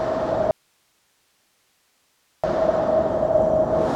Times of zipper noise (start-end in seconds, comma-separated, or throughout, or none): none